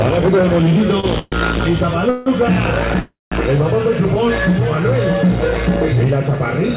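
At 1.00 s there is a short stall from a late packet. For about 31 ms the sound is held on its last moment, a brief smeared buzz, and then continues from the same point with nothing lost. On a spectrogram this shows as a thin band of repeated, flattened harmonics. The waveform shows a short run of near-identical cycles with a slight dip in level before normal motion resumes.

Three call audio freezes follow, at 1.19–1.34 s, 2.10–2.28 s and 3.00–3.34 s. Each sounds like the audio catching on a buzz that fades before it picks up exactly where it stopped. The likely cause is packets held up in transit, which ran the jitter buffer dry so the receiver filled the gaps with concealment. The fills last about 127 ms, 164 ms and 313 ms. The first ends in about 10 ms of silence, the second runs straight back into the sound, and the third decays into about 190 ms of silence. On a spectrogram each appears as a smeared, stationary stripe that fades out. 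In the waveform the envelope tapers, flattening to silence at the third.

Throughout, the call path leaves nothing above 4 kHz, which fits a 64 kbps G.711 mu-law codec.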